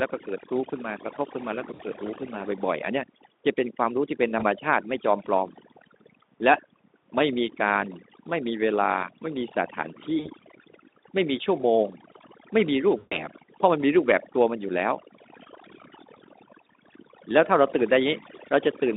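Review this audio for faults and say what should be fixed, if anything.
Overdone noise removal runs through the whole speech recording. The suppressor pushes individual frequency bands down or out whenever they sit close to its noise estimate, so the background falls to near silence scattered with twinkling specks, and quiet parts of the voice are stripped out with it. Unlike codec coarseness on this narrow 250 Hz to 3.7 kHz Speex line, the damage tracks level: it is worst in soft passages and pauses. Prevent it by lowering the reduction strength or cleaning the source noise instead.

VoIP packet loss concealed by the speech codec appears at 1.73 to 1.81 s, 4.39 to 4.45 s, 10.19 to 10.30 s and 12.97 to 13.26 s. During each gap the decoder keeps extending the last pitch and spectral shape while lowering the gain, so the voice smears into a buzzy tone or tinted noise that fades, and it stays weak briefly after audio resumes. 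The 13 s dropout is the longest, and its length points to about seven lost 20 ms frames. What sets it apart from noise-removal artefacts is that it comes in isolated bursts rather than a constant coloration. Prevent it with a more stable network path, a jitter buffer, or forward error correction.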